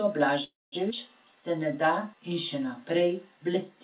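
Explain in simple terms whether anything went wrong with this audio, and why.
Three things went wrong as the sound travelled through the call.

Call audio freeze, from 0.44 to 0.75 s: the likely cause is that packets carrying the sound were held up on the network, so the receiver's jitter buffer, its small waiting store of incoming audio, ran out. To cover the gap, the receiver stretched the last bit of sound into a fading buzz, which dies away to silence for about the final 0.21 s. When the delayed audio finally arrived, it carried on from exactly where it had stopped. Nothing is lost, but a pause of roughly 0.28 s has been pushed into the middle of the sound.

Skip ahead, at 0.90 to 0.93 s: shortly afterwards a chunk of sound was dropped, either on the way or because the receiver's store overflowed while later audio was already waiting. About a sixth of a second of sound is simply gone. 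Playback jumps forward with almost no gap, and the two sides of the cut are joined nearly directly, so the sound seems to leap abruptly.

Jitter buffer slow-down, from 1.25 to 3.13 s: the receiver's store was running low, or it had just decided to hold more audio in reserve, so it built up a reserve by repeating tiny slices of the sound many times over. This adds about 0.14 s in total and plays that stretch at roughly 93 % of normal speed. The pitch stays the same, but the sound is slightly drawn out and sluggish. Throughout, the call line also removes everything above 4 kHz, giving the familiar narrow telephone tone.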